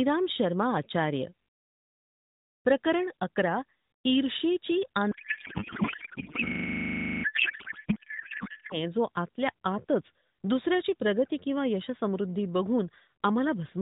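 From 5.12 s to 8.77 s the speech gives way to garbled noise and warble that hardly follows it. This is a codec payload misread: the AMR frames were packed octet-aligned but read as bandwidth-efficient, so the decoder pulls its parameters from the wrong bit positions. On a spectrogram the speech harmonics and formants give way to smeared, disordered energy, still capped at 4 kHz by the narrowband AMR path, whose light coding, which fits the 12.2 kbps mode, sounds normal around the fault.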